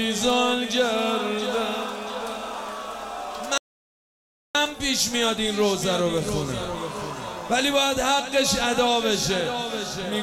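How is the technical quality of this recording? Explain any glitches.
Technical quality suffers from one audio dropout to silence, 3.58 to 4.55 s. The input signal was likely lost while recording continued writing silence, so the sound stops abruptly for 0.97 s of dead silence with no room tone, then resumes mid-flow.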